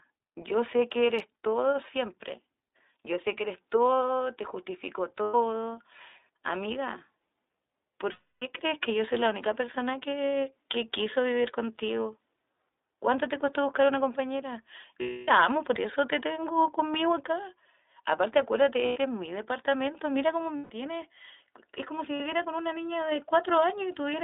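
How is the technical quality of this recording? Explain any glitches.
The quality is poor. It is narrowband, low-bitrate speech with audible coding damage and six short dropouts.

Throughout, the iLBC codec shapes the sound. The speech sits in a telephone band of about 300 Hz to 3.7 kHz, and nothing above that passes. The result fits iLBC's 15.2 kbps mode. Each 20 ms frame's excitation is coded on its own, without help from earlier frames. At this rate the damage is plainly audible. Speech stays clear but sounds rough and somewhat synthetic.

The six glitches are lost iLBC frames. They fall at 5.22 to 5.35 s, 8.12 to 8.44 s, 15.02 to 15.30 s, 18.86 to 18.98 s, 20.56 to 20.72 s, and 22.14 to 22.22 s. The gaps run from 60 ms to 300 ms. In each, the decoder repeats the last pitch cycle mixed with noise. That sounds like a held, buzzy or breathy vowel, fading in the longer gaps near 8.1 and 15.0 s. 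Clean speech then returns almost at once.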